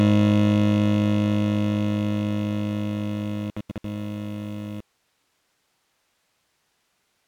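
Bluetooth dropout at 3.51 to 3.84 s breaks up this music clip: about 256 ms of sound vanishes in abrupt holes scattered over 341 ms, the longest 85 ms, likely because wireless packets arrived too late and were discarded. Between holes the music carries on as if it had kept playing. An audio dropout to a faint residue follows from 4.81 s to the end, where the music cuts out mid-flow to hiss about 45 dB below it, likely a lost signal feeding a still-live downstream path.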